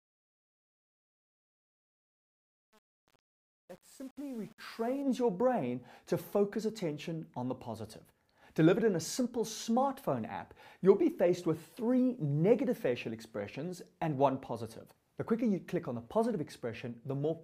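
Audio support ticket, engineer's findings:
Truncation distortion on the fade, 0.0 to 5.02 s. Fade/gain stage drops low-order bits with no dither, which fits an 8-bit word length. Quiet end of the fade collapses into coarse square steps: gritty.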